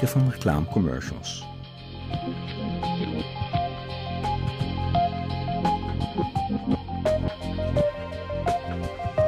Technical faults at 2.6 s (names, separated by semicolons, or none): none